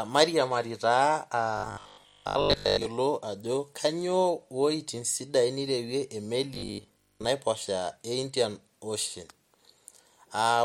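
Speech, where audio likely arrived too seldom and short buffers were repeated, giving robotic sound at 1.57–2.85 s and 6.54–7.26 s: a rigid, metallic 50 Hz buzz, fitting a 20 ms repeat length, that only roughly follows the words.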